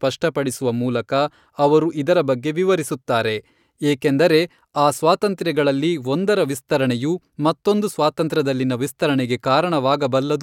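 A short recording of speech, with no technical fault anywhere in it. There is nothing to point to at any moment, so there are no times or causes to give.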